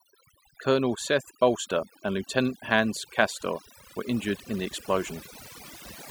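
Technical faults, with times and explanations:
Throughout: overdone noise removal. A noise reduction stage was set too aggressively on a noisy speech recording, cutting individual frequency bands down or out whenever their level sat close to its noise estimate. Quieter parts of the voice fell under that threshold and were removed along with the noise, so the background drops and breaks up into twinkling, warbling specks.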